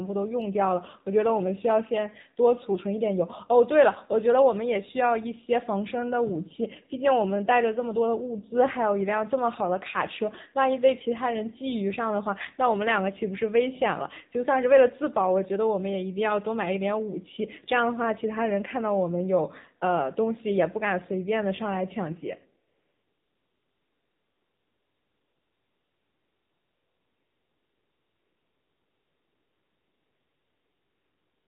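Throughout, the speech carries AMR narrowband mobile codec damage: band-limited to 4 kHz, buzzy and synthetic from sparse pulse excitation, consistent with a low mode near 7.4 kbps. From 22.68 s to the end, about 8.8 s, AMR comfort noise takes over: no speech frames arrive, and the receiver substitutes steady, smooth synthetic noise for the real background.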